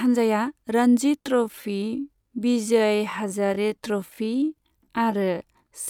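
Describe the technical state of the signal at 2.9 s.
A time-stretched section runs from 1.18 s to the end, slowed to about 0.68 times speed, likely by software repeating short pieces to keep pitch, leaving the speech dragging.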